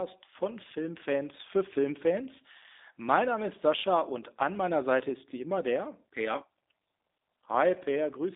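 From start to finish the speech carries G.729 codec damage, plainly audible. Each 10 ms frame is rebuilt from a vocal tract filter, a pitch predictor and a few pulses, which fits an 8 kbit/s G.729A stream. Nothing survives above 3.8 kHz, and the line band runs from 250 Hz to 3.7 kHz. What separates this from simple telephone band-limiting is the coding itself: voiced sounds turn slightly rough and synthetic, with a buzzy, pulse-built texture.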